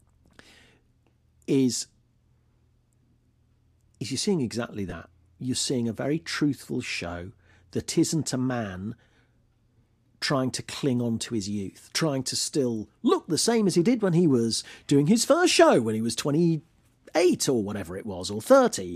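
At 4.90 to 4.92 s, just after "is you're seeing exactly", lost LE Audio frames leave a gap of about 20 ms, which fits two missing 10 ms frames. The LC3 decoder, which is likely at work given the light graininess of the stream, fills the gap by repeating the last spectrum with scrambled phase signs. This produces a brief hissy smear in place of clear speech. On a spectrogram the harmonic lines break into a short block of diffuse noise, and the waveform shows a rough, incoherent patch.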